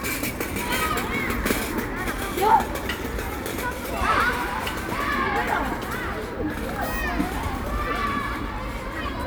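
No technical faults are audible anywhere in this recording of sounds.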